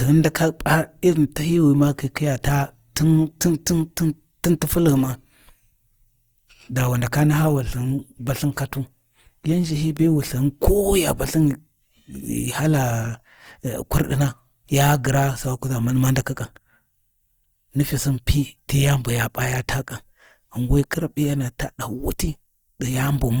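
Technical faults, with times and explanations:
Throughout, Opus compression: plainly audible grainy, rough texture where starved bands get filled with noise, likely from a music-mode encode around 24 kbps.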